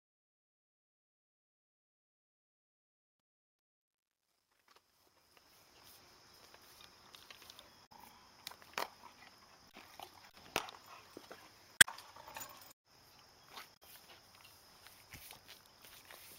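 From 0.0 to 5.85 s the fade shows truncation distortion: the quiet end turns gritty, which fits an undithered stage keeping about 10 bits. Damaged data in the compressed stream then causes brief glitches at 7.83 to 7.92 s, 11.74 to 11.88 s and 13.72 to 13.83 s, as the decoder misreads frames and loses sync.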